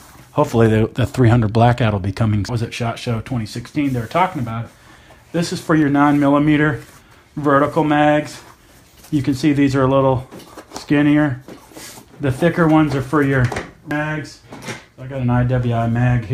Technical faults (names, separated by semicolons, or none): dropped samples; damaged data in a compressed stream